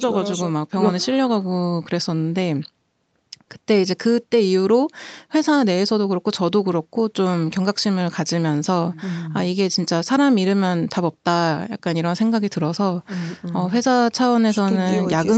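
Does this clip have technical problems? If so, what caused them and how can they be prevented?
No, there's nothing here that counts as a technical problem: the speech has come through a call's microphone processing and an Opus call path, so it tops out at 8 kHz, which is simply how that route behaves and nothing that needs preventing.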